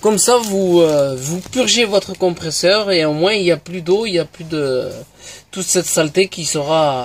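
No technical faults can be heard anywhere in the audio. Nothing in it points to a problem at any stage of capture, processing or playback.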